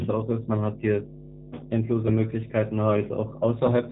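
A speech recording carries two faults throughout. The first is mains hum: a steady 50 Hz tone at roughly 15 dB below the speech, from a ground loop or a nearby transformer leaking the power line into the signal. On a spectrogram it shows as an unbroken horizontal line at 50 Hz, with fainter low harmonics stacked above it, running through pauses as well as speech. In the waveform the quiet gaps never fall flat and show a regular low-frequency ripple. The second is G.729 codec damage, which is plainly audible. Nothing passes above 3.8 kHz, and the voice sounds rough and slightly synthetic. That fits an 8 kbit/s VoIP codec that resynthesises speech from a vocal-tract filter, a pitch predictor and a few pulses per short frame, not from the original waveform. On a spectrogram the energy stops sharply at 3.8 kHz, and the harmonics look smeared and blocky from frame to frame.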